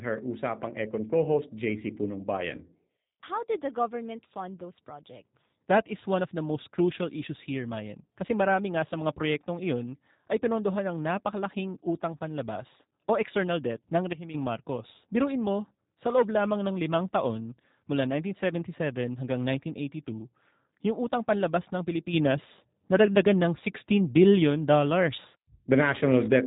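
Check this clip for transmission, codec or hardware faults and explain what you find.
Two kinds of fault are present: coding damage from a G.729 codec throughout, and two sudden gain jumps.

G.729 codec, the whole clip: the speech is rebuilt from a vocal tract filter, pitch predictor and sparse pulses, which fits an 8 kbit/s G.729A stream. Nothing above 3.8 kHz survives, so the speech sounds muffled, plainly rough and synthetic.

Sudden gain jumps, 14.13 to 14.34 s and 22.13 s onward: the level steps instantly, with no ramp, likely from a gain setting applied abruptly. At 14.13 s everything drops by about 12 dB for a fifth of a second. After "panlabas ng" it rises about 6 dB until the end.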